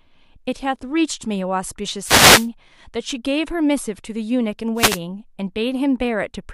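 At 2.02 to 2.48 s and again at 4.75 to 4.99 s, wireless microphone noise hits break in: the FM radio link fades as reflected signals cancel, receiver noise rises, and each dropout is heard as a brief burst of static swishing over the speech.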